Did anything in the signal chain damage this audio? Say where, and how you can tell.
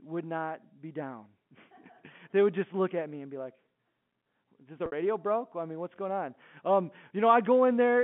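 Yes, at the network stage: packet loss with pitch repetition at 4.86 to 4.92 s. For about 60 ms the sound hangs on one slightly buzzy, held pitch that thins out before the audio cross-fades back in. The receiver lost a burst of packets, which fits six 10 ms frames, and covered the gap by looping the last pitch period and fading it out. The G.711 line band underneath, 150 Hz to 3.4 kHz, carries on as expected.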